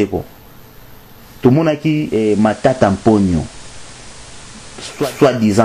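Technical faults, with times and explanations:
1.91–5.20 s, digital radio blending to analogue: the receiver loses the digital stream and cross-fades over about 427 ms to the station's FM broadcast, then fades back near 5.20 s. While on FM a steady hiss sits roughly 25 dB below the programme, the FM noise floor. Loudness stays matched across the switch, with no level step.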